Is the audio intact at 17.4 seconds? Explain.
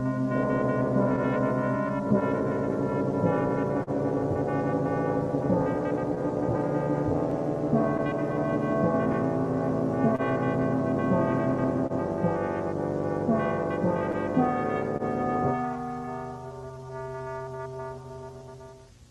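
No. Repeated timing corrections run from 16.72 to 18.83 s: the receiver repeats short pieces, playing at 99% speed and adding about 40 ms, heard as slight hiccups. This comes from clock drift between sender and receiver, present throughout: the sender's clock runs roughly one and a half percent slow, so the jitter buffer keeps draining.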